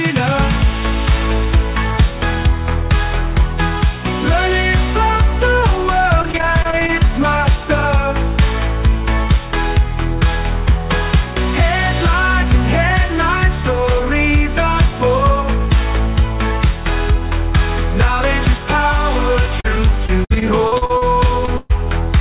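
From 6.22 to 6.90 s there's repeated packet loss, the robotic kind. Eight short holes, none longer than 21 ms, each get patched by stretching the previous sound, so it goes choppy. It happens again, worse, from 19.60 to 21.03 s, with ten gaps up to 58 ms and about a fifth of that span filled in. Then a short concealed packet loss at 21.45 to 21.49 s: about 20 ms got papered over, leaving a brief smear or wobble. Right after that, from 21.57 to 21.72 s, comes a burst of packet loss. Roughly 120 ms is gone, the last sound is held and faded out as a buzz or hiss, and the audio picks up further along. All of this sits on a call path with nothing above 4 kHz, which points to a narrowband codec like G.711.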